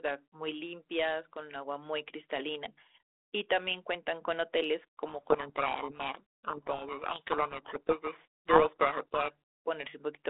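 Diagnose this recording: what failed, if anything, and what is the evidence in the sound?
The codec stage is where it breaks. From 5.08 s to 9.32 s the speech sinks under harsh, grinding distortion. That's a codec payload misread: the G.726 code words are unpacked in the wrong bit order, so the decoder rebuilds garbage differences until the packing agrees again.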